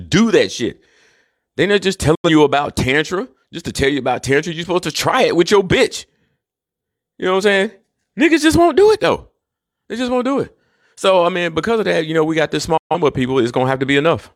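At 2.15 s, right after "not just", the speech fades in about 8 ms to a brief silence, returning by 2.29 s before "you about"; a second, slightly longer hole follows "know we got this" from 12.77 to 12.95 s. These are digital broadcast dropouts: the receiver muted on corrupted or missing frames, losing roughly 85 ms and 128 ms of programme, which fits two and three dropped frames.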